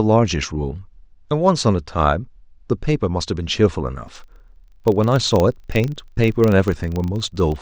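From 4.04 s to the end, a low, even buzz of about 25 Hz rides under the speech, a rapid train of ticks that grows louder and softer with the speech itself. This is a filter restarted on every block: its stored state is discarded each time a new block arrives, so it begins from silence and throws a small transient at every boundary. Blocks roughly 40 ms apart produce the 25 Hz repetition.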